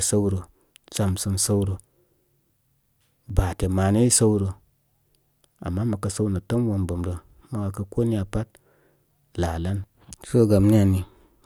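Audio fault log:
3.30 s and 7.30 s, overlapping chunks: each 4.0 s chunk of the speech started about 7 ms before the previous one ended, so that short slice plays twice at every join. The doubled sliver is heard as a brief click or stutter, recurring every 4 seconds.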